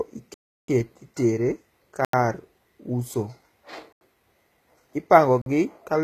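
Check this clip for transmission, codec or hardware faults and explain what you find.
Two faults are present: a codec coloration across the whole speech clip, and four blocks of digital silence.

Throughout, the treble is bright but synthetic, with s sounds turning gritty and metallic and nothing above 14.9 kHz. This is likely HE-AAC compression at a low bitrate, around 20 kbps. The codec keeps only the lower spectrum and rebuilds the top by copying lower bands upward under a coarse envelope, so the upper harmonics no longer line up with the real ones. A plain low-pass filter would sound dull instead of falsely bright.

Four blocks of digital silence fall at 0.34–0.68 s (about 341 ms), 2.05–2.13 s (85 ms), 3.93–4.01 s (85 ms) and 5.42–5.46 s (46 ms). In each, the signal drops to silence and returns with no fade, leaving a dead hole. The first three lengths fit output buffers of 16384 and 4096 samples that weren't filled in time. 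Packet-loss concealment would fill such gaps with smeared or repeated sound, but these are truly empty.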